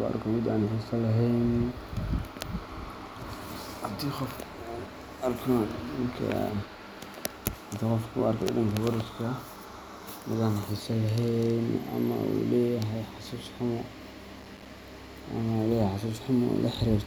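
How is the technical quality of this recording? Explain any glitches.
A short burst of gritty crackle tears through the speech from 14.40 to 14.73 s. This is processor overload crackle: the processor kept missing its deadlines for small audio buffers, and each miss left a hard-edged gap of silence. The texture points to buffers of roughly 5 ms, with something like fifteen dropped in quick succession.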